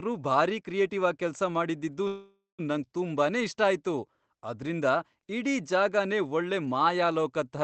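After "ಕ್ರಿಯೇಟಿವ್ ಆಗ್ ಕೆಲ್ಸ ಮಾಡಿದ್ದಿದ್ದು", from 2.07 to 2.61 s, a call audio freeze occurs. The last sound stretches into a fading buzz, then 200 ms of silence. Speech resumes where it stopped, 0.51 s late, nothing lost. Delayed packets likely emptied the jitter buffer.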